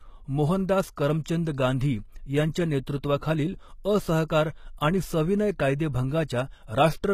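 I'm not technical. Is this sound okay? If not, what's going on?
No, it has a couple of problems. The whole speech clip has a plainly gritty, metallic edge on s sounds, with nothing above about 15 kHz. That points to HE-AAC compression, likely, which keeps the lower sounds and fakes the top end by copying them upward.

There are also two moments of pre-echo, at about 1.24 and 4.28 seconds: a short hiss just before a sharp sound. The compression spreads its noise across a short chunk of audio, so it leaks into the quiet instant beforehand and softens the attack.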